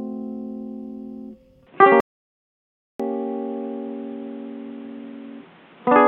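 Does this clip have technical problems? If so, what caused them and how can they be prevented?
Yes. From 1.67 s to the end, the music turns dull and boxy. There is no gap at the change, and the level stays about the same. A faint new background noise appears, well below the music. This pattern points to the input likely being switched to a poorer device, such as another microphone or a headset's call profile with a narrower band. Prevent it by locking the input device and disabling automatic device switching before recording.

A playback stall follows at 2.00 s. The music stops dead for about 0.99 s and returns at 3.00 s. The player probably ran out of data, or its audio thread was blocked. Output went silent until it recovered. Prevent it by using a larger playback buffer and keeping the audio thread free of blocking work.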